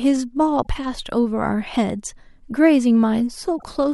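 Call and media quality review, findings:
Short glitches at 0.59–0.67 s and 3.54–3.65 s in the speech. Damaged data in a compressed stream: corrupted bytes make the decoder misread frames, lose sync and hunt for the next frame header. Probable component: stream transport or storage ahead of the decoder.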